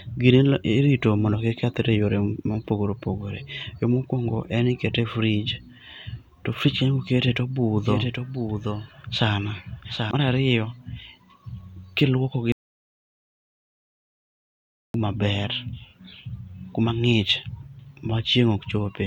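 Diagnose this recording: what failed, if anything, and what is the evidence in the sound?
From 7.77 to 10.11 s, right after "koketee to", you get a doubled audio track. A second full-band copy of the speech trails the original by around 0.7 s, sitting only a few dB down. It has no reverb tail or room colour, and it snaps in and out hard at both edges. That points to the routing or buffer stage: the same signal most likely got captured twice, once through a slower path, and both were summed into the mix.

Then there's an audio dropout to silence from 12.52 to 14.94 s, just after "kiluoko gi". The speech cuts off mid-flow and the gap is silent, with no room tone or noise floor at all, for about 2.42 s. Whatever was said there is simply gone. It's most likely an upstream input loss, like a device or link dropping out, while the recorder kept writing samples of nothing.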